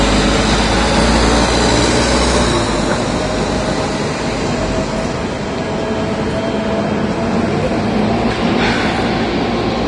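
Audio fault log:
throughout: likely Vorbis compression; nothing above 10.6 kHz, with hissy, grainy treble and blurred attacks where coarse quantisation replaces fine detail with noise, fitting roughly 32 kbps.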